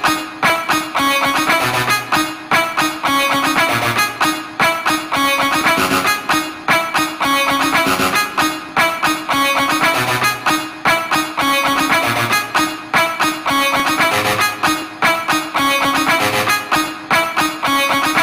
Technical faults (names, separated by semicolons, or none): periodic USB or driver dropouts